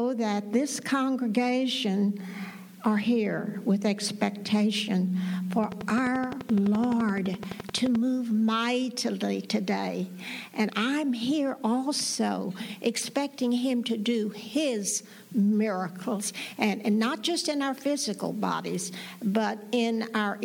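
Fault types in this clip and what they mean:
Train of clicks: from 5.64 to 7.96 s, a run of some thirty near-identical pulses ticks over the audio at a steady 11.7 per second, peaking about 10 dB above the sound, most likely interference from nearby equipment or a faulty connection injecting repeated pulses.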